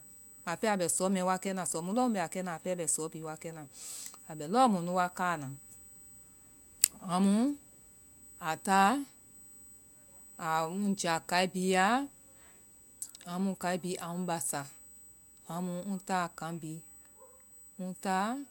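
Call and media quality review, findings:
USB whine across the whole speech clip: steady fixed-pitch tone at 8 kHz, roughly 25 dB below the speech. Probable component: USB audio interface power or ground path. Current drawn in 125-microsecond microframes leaking into the analogue signal.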